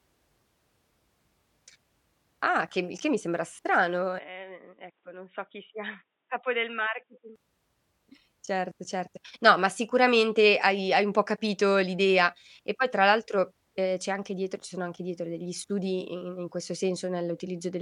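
Speech recording in which the input likely switched to a poorer device, from 4.19 to 7.36 s, right after "che mi sembra strano". The replacement device cuts everything above 3.8 kHz, so the voice turns dull and boxy during that stretch. It drops roughly 5 dB in level and brings a faint new background noise far below the speech. The change happens without any gap at the switch, and the full, brighter sound returns at 7.36 s.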